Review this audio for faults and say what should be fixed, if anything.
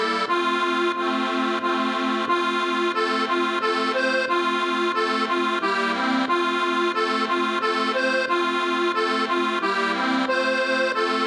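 Nothing here needs fixing; no faults were found.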